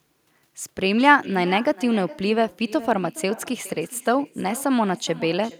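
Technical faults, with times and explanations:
Throughout, echo with no canceller: every phrase of the speech is trailed by a fainter copy of itself arriving about 0.4 s later, about 18 dB down, sounding thinner than the direct voice. The far end is playing the call over a loudspeaker and its microphone is catching it, with nothing there to subtract it, so the talker's own voice returns after the network round trip. Unlike room reverberation, which smears continuously into a tail, this is a distinct delayed repeat.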